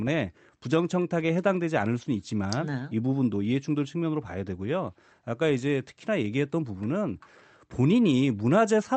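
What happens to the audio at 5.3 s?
Nothing goes wrong at 5.3 s: the speech carries straight through with no dropout, glitch or distortion, only the steady band-limiting to about 8 kHz from the call codec path that runs throughout.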